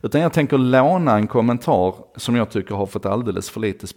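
A speech clip with one loud pop at 1.23 to 1.25 s, between "jag tänker låna" and "kommentar som jag tycker". It is a single sharp pulse, a few decibels above the speech, which continues underneath. The likely cause is a voltage spike from a plug, switch or static discharge.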